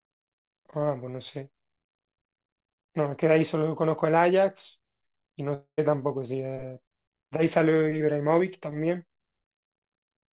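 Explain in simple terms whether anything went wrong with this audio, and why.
From 5.54 to 5.80 s, the speech turns into a fading buzz, then silence. This is likely a long network dropout, and that bit of speech is lost.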